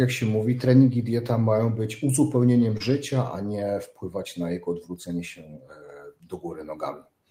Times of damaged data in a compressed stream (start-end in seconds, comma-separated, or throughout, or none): none